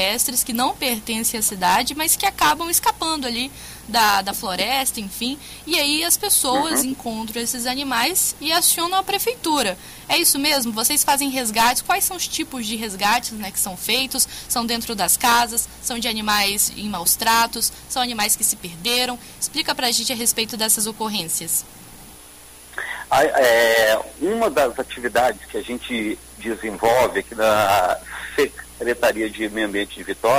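Nothing is technically wrong with the clip; no faults can be heard anywhere in it.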